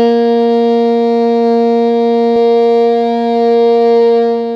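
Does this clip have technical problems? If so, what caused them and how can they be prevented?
Yes. From 2.36 s to the end, the music has a doubled audio track: a full-band copy about 300 ms late and roughly 5 dB quieter, starting abruptly with no decay. It likely comes from a second, slower capture path or an out-of-step edit. Route only one capture path to the mix and check edits for overlapping copies.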